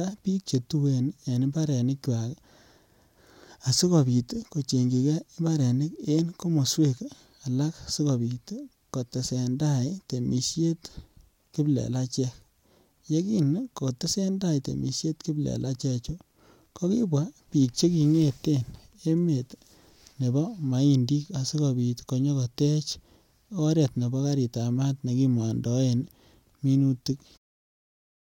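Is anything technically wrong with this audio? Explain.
No, nothing technically wrong can be heard here.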